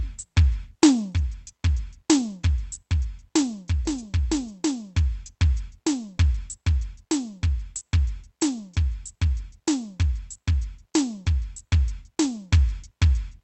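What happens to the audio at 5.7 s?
Nothing goes wrong at 5.7 s: the music carries on intact through that moment, with only the steady high-frequency limit near 8 kHz that the call codec's band setting imposes throughout.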